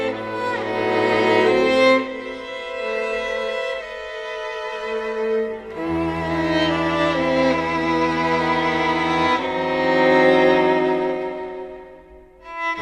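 Nothing in the audio stands out as a technical fault, so there's nothing here to flag.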